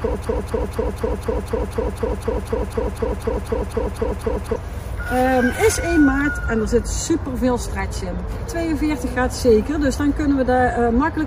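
Right from the start the clip is already caught in a broken-record loop, and it stays stuck until about 4.56 s. A fragment of roughly 0.25 s (248 ms) plays back to back, identical each time, about 17 times over. Whatever should have played during those seconds is simply gone. The likely cause is a player, encoder or stream that stalled and kept resending the last chunk it had buffered until it recovered.

At 8.45 s there's a single quick glitch, a sign of damaged data in a compressed stream. For a moment some of the compressed frames were corrupt or missing, so the decoder couldn't read them properly, lost its place and had to search for the next valid frame header. You hear a short blip that lasts only about 14 milliseconds, and the audio picks up again just past it.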